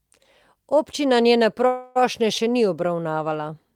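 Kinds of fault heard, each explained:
Call audio freeze: from 1.67 to 1.97 s the speech stops advancing and the last sound is stretched into a fading buzz or hiss for about 0.28 s, likely because delayed packets emptied the jitter buffer. Speech resumes at "še ni" with nothing lost, now 0.28 s late.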